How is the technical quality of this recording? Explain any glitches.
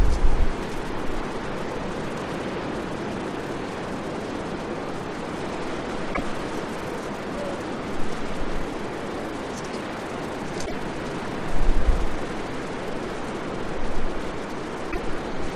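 The recording has two kinds of glitches: three short hiccups that sound like a broken MP3 bit reservoir, and a run of CD scratch ticks near the end.

The hiccups land at 6.13–6.21 s, 10.65–10.73 s and 14.90–14.99 s, each lasting about 80 ms, or roughly three 26.1 ms frames. At each one the sound skips ahead. That's likely a bit reservoir problem: frames went missing, and the frames after the cut reached back for borrowed data that was no longer there, so they decoded from the wrong bytes until the stream resynchronised.

From 12.03 s to 13.73 s there are seven CD scratch ticks, about four a second, the longest only about 2 milliseconds. This is the classic pattern of a scratch passing under the laser once per revolution. It wipes out more data than the error correction can rebuild, so the player patches or mutes those few samples, and you hear a steady little ticking that comes and goes.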